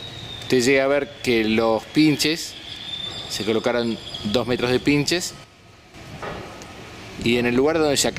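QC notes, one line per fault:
5.44–5.94 s, sudden gain jump: the level drops by about 8 dB at 5.44 s and comes back at 5.94 s, with the background noise stepping down and up along with the sound. The likely cause is a gain setting applied between adjacent samples without a ramp.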